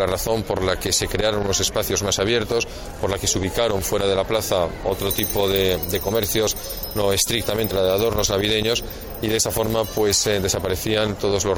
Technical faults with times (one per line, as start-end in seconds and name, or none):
7.70 damaged data in a compressed stream